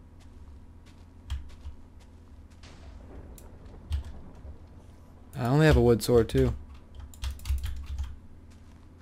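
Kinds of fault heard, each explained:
No fault can be heard anywhere in the signal, which shows no dropouts, clipping, noise bursts, timing errors or level jumps.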